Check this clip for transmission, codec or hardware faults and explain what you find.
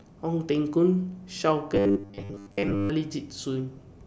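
One fault here: from 1.75 to 2.90 s the speech turns into robotic sound from repeated short buffers, a rigid metallic buzz at 100 Hz. Most of that stretch is likely a 10 ms chunk looped while fresh audio lagged.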